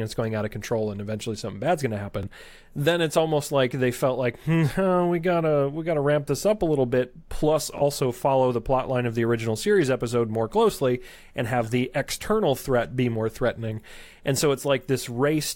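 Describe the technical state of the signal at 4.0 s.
At 4.0 s the speech signal is intact, with no audible fault at that moment.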